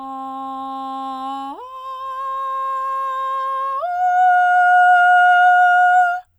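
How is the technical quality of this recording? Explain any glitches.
The technical quality of this music recording is sound, with no glitches to explain.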